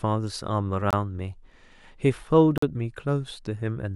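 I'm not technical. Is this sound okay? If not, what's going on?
No. There's a block of digital silence at 0.91 to 0.93 seconds and another at 2.58 to 2.62 seconds. The speech drops out abruptly and returns just as abruptly, most likely because the program didn't deliver its next chunk of audio in time. The longer gap fits a 2048-sample buffer.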